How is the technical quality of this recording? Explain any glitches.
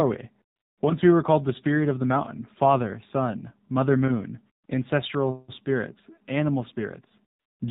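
The recording has clear technical faults: it has passed through a low-rate mobile speech codec, and three pauses are filled with synthetic noise.

AMR narrowband mobile codec damage runs through the whole clip. The speech was squeezed into 8 kHz sampling and rebuilt from a vocal-tract model driven by sparse pulses, and the plainly audible buzzy, synthetic edge points to a low mode around 7.4 kbps. On a spectrogram, energy stops flat at 4 kHz and harmonics look smeared, with blocky detail at a 20 ms frame rhythm.

AMR comfort noise appears three times: 0.56 to 0.78 s (about 220 ms), 4.66 to 4.68 s between "father son mother moon" and "ancestral spirits animal", and 7.40 to 7.60 s. In each case the phone judged the talker silent, stopped sending speech frames, and the receiver substituted smooth generated noise. The real background is replaced by flat, steady hiss that switches in abruptly. 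On a waveform, these stretches appear as low, even-amplitude bands with sharp edges, and on a spectrogram as uniform texture.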